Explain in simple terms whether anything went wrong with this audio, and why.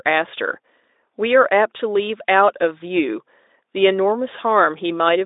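Yes, one thing went wrong. Between 1.77 and 1.82 s there is VoIP packet loss concealed by the speech codec. The gap points to one lost 20 ms chunk of speech. The Speex decoder filled the hole by stretching out the sound it had just played, which gives a short buzzy or noisy blip that fades. Because each new chunk is built on the previous one, the distortion lingers a few tens of milliseconds after the data returns.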